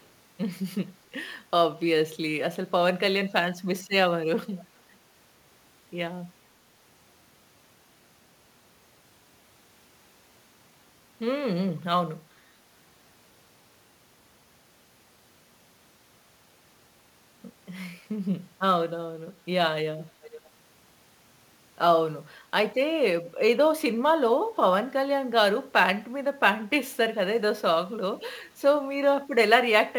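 Sample clock jitter runs through the whole of this speech recording: an unsteady converter clock, wandering by a few microseconds, puts a fine hiss and roughness roughly 30 dB below the signal that grows on loud, bright passages and disappears in pauses. Echo leak appears at 0.0–0.06 s, 20.22–20.5 s and 23.25–23.31 s as faint delayed copies of the voice arriving about 438, 463 and 467 ms late, quietest at the start and clearest near 20.2 s, likely from a loudspeaker-side echo canceller letting residue back.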